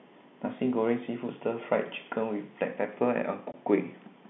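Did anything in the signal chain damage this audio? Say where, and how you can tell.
Yes. At 3.52 to 3.54 s the speech drops out completely for about 20 ms, a short hole with abrupt edges. This is packet loss filled with silence, damage at the network stage. The receiver got nothing for that stretch and played silence instead of concealing the gap, and the gap's length fits a single lost 20 ms packet. The G.711 telephone coding confines the sound to the usual 150 Hz to 3.6 kHz line band.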